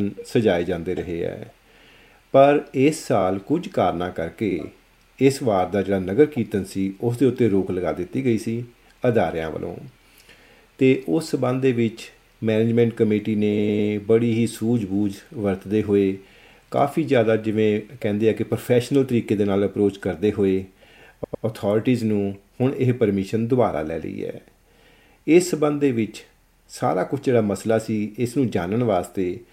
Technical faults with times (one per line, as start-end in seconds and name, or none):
3.20-3.23 repeated frames
4.51-4.56 repeated frames
13.57-13.89 repeated frames
21.23-21.44 repeated frames